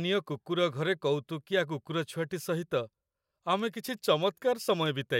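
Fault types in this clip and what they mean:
Word clock ticks: a receiver not locked to the sender's clock slips one sample each time they drift apart, giving around seven sharp ticks at a steady rate, roughly every 0.7 s, unlike randomly spaced clicks.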